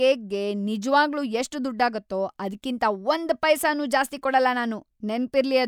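Speech recording, with no audible technical faults anywhere in the clip.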